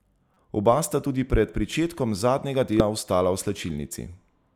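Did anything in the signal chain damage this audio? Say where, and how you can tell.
Yes. At the codec stage, damaged data in the compressed stream made the decoder misread frames and lose sync while it hunted for the next valid header. That produces the brief glitches at 0.34–0.37 s and again at 2.80 s.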